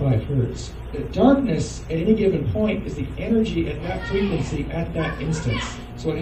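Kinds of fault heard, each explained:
Mains hum: power-line current leaking into the audio through a ground loop or nearby transformer, heard as a steady 60 Hz drone from 4.03 s to the end, about 20 dB below the signal; a spectrogram shows a flat line at 60 Hz, the waveform a regular ripple.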